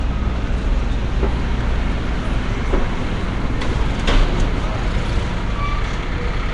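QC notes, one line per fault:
Throughout: Nellymoser compression. A rough, hissy halo and smeared, underwater texture sit on the sound, with nothing above 10.6 kHz. This likely comes from Flash's Nellymoser Asao codec, at a rate fitting about 44 kbps, filling bit-starved bands with noise.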